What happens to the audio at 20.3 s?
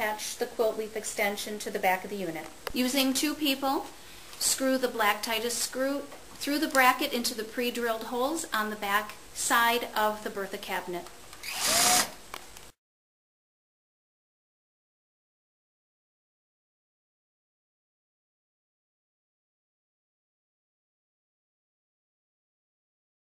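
Nothing goes wrong at 20.3 s; the audio plays through that moment intact, with no dropout, click or distortion.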